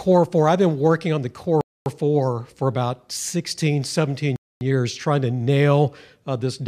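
Two holes of silence, about 250 ms each, break the speech at 1.61 s and at 4.36 s, just before "years trying to nail". This is a gap between chunks: the audio arrives in 2.5-second pieces with silence inserted at each join.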